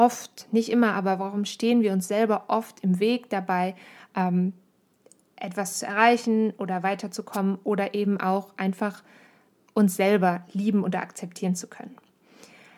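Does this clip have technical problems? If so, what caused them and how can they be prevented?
Yes. At 7.32 to 7.37 s there is a wireless microphone noise hit: the analogue FM radio link briefly faded as reflected signals cancelled at the receiver, so receiver noise surged through, heard as a short burst of static over the speech lasting about 50 ms. Better antenna placement with diversity reception and a clear line of sight to the transmitter would prevent it.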